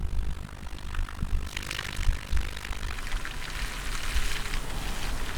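From 0.00 to 2.96 s the sound carries overlap-add ripple. The audio was split into windowed frames and rejoined with an overlap whose gains do not sum evenly, so the level dips once per frame, about 60 dB deep, at around 50 Hz. It comes across as a rough, buzzy flutter chopping the sound itself. Unlike 50 Hz mains hum, no separate tone is added. The ripple stops completely after 2.96 s.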